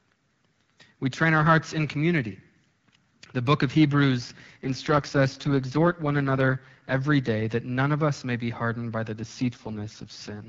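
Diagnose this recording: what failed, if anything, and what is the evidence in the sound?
Network-driven AMR rate drop. After "book of" (4.17 to 6.98 s) and "be hardened by the" (9.19 s onward), speech turns rough and synthetic. Band holds. This suggests 12.65 falling to 6.6 kbit/s.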